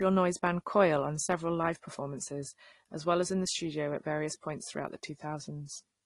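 From start to finish the speech has nothing above 12 kHz, and two kinds of smearing and graininess sit on top of each other. That's likely transcoding between lossy codecs, with something like a low-bitrate AAC encode later squeezed through Opus.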